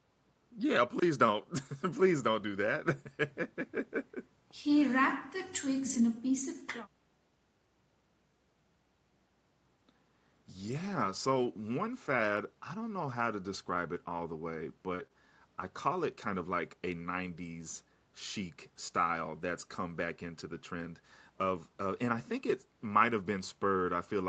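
Speech carried over an Opus call path, with content stopping near 8 kHz as that wideband link allows. It has two kinds of packet fault. Lost packets rebuilt from error correction occur at 1.57–1.71 s, 5.85–5.99 s, 10.59–11.49 s and 14.99–15.05 s. Each time, the following packet's low-bitrate copy stood in for the missing one, so nothing drops out. Instead, stretches of roughly 80 ms, then 80 ms, a long 460 ms and 40 ms turn grainier and noisier. On a spectrogram these show as blurred, smeared harmonics with extra noise filling the gaps between them. The waveform stays continuous. Around 15 s the damage clusters into short concealed packet loss at 14.95–15.01 s and 15.07–15.11 s. There, audio arrived too late and the decoder extended the previous sound's pitch or shaped noise for about 37 ms and 23 ms before crossfading back, heard as a brief wobble or smear. A spectrogram shows briefly frozen, repeated harmonic bands, and the waveform shows a short, overly regular stretch.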